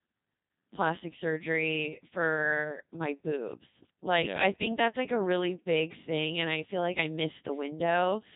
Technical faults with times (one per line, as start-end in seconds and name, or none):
0.00-8.36 Codec 2 vocoder